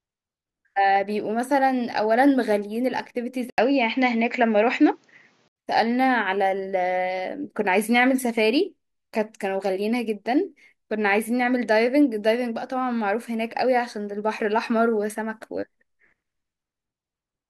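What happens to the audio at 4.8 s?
At 4.8 s the input has likely switched to a poorer device, from 3.5 to 5.56 s, whose narrower band leaves the speech dull and shifted in level. A spectrogram shows an 80 ms gap, then nothing above 7.6 kHz; the waveform steps in amplitude.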